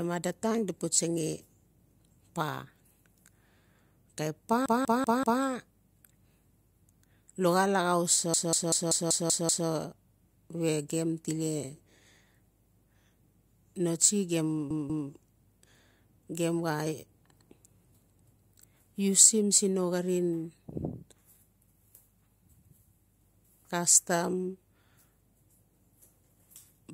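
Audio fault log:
4.66–5.42 s, 8.34–9.68 s, 14.70–15.09 s: repeated frames. A 192 ms block, which fits six compressed frames, replays four, seven and two extra times. The result is a stutter, and the clip runs about 2.5 s longer.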